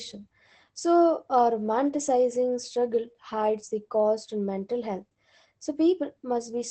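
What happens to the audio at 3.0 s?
At 3.0 s, as throughout, the speech carries Opus voice compression: SILK coding caps the band near 8.6 kHz and sounds muffled and hoarse, consistent with roughly 12 kbps.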